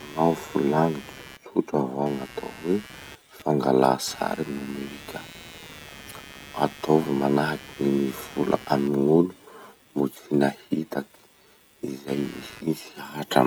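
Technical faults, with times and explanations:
Throughout, computer activity noise: a buzzing, chirping layer sits under the speech at roughly 20 dB below it, pulsing at around 150 per second, and it rises, falls and changes texture without following the speech at all. That independence is the giveaway. As the processor, graphics card or mouse draw shifting current, the shared ground reference of the audio circuit moves with them, and those fluctuations leak into the signal path as an electrical buzz.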